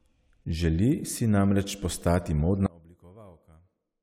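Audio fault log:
2.66–4.02 s, one channel inverted: after "si namreč postati" the speech nearly vanishes, about 26 dB quieter, likely because reversed polarity cancels the shared centre in mono.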